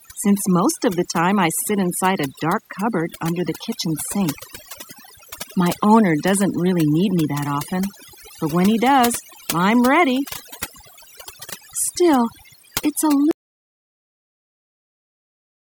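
From the start, the background drops and breaks up into twinkling, warbling specks. This is overdone noise removal: an aggressive noise reduction setting pushed frequency bands near its noise estimate far down or out, stripping quieter speech detail too.

At 13.31 s the sound cuts out abruptly into silence, with no room tone, and stays silent through the end of the clip. This audio dropout to silence likely came from the input being lost while the recorder kept writing silence.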